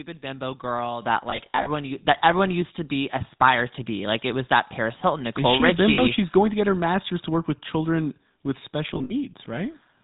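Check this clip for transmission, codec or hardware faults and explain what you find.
Three faults are present in this speech clip.

GSM full-rate codec, throughout: the vocal tract is modelled and driven by sparse, regularly spaced pulses, with nothing above 4 kHz. This gives plainly audible buzzy, gravelly roughness, consistent with 13 kbps coding.

Microphone volume stepped up, at 1.02 s and 2.04 s: the input gain was raised abruptly, by about 8 dB and then about 4 dB, so speech and background jump louder together.

Lost GSM frames, at 1.3–1.68 s, 5.94–6.01 s and 8.94–9.34 s: missing frames were filled by repeating the last good one. This produces brief rough, metallic ringing, in short scattered runs of up to about 70 ms.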